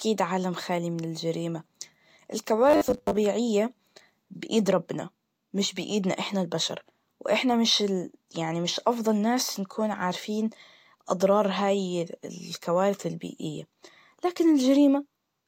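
From 2.70 to 3.17 s the speech takes on robotic sound from repeated short buffers: a rigid, metallic 100 Hz buzz that loosely tracks the words. Roughly half the audio is repeated material, likely a 10 ms buffer replayed whenever fresh audio arrived late.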